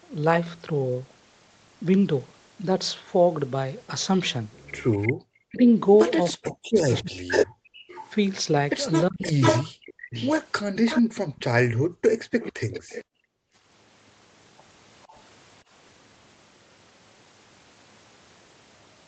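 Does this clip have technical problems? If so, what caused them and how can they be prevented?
Yes. There are three kinds of fault.

Echo leak is heard from 4.91 to 13.04 s. A delayed copy of the speech follows it by about 456 ms. It is nearly as loud as the original. A brief, much fainter trace returns from 15.02 to 15.20 s. The likely cause is a far end playing the call on a loudspeaker. Its echo canceller failed to remove what its microphone picked up and sent that back. Using a headset at the far end, or an echo canceller with a longer, better-converged filter, would prevent it.

Speech suppressed in double talk occurs from 5.42 to 7.31 s, 9.09 to 10.15 s and 12.38 to 12.89 s. In each span the talker's speech drops sharply, nearly to silence, in pieces. This happens while the echoed sound overlaps it. The echo canceller likely could not separate the live talker from the returning echo, so it turned both down. 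Better double-talk detection, or removing the loudspeaker echo at its source, would prevent this.

Background gated by the echo canceller appears from 7.59 to 7.87 s and again from 11.02 to 13.54 s. The room sound falls away by about 39 to 40 dB. In the longer span it drops out in short pieces totalling under a second. The canceller clamped the microphone hard while the loudspeaker played, then released it. Gentler suppression with comfort noise to fill the gaps would prevent these dropouts.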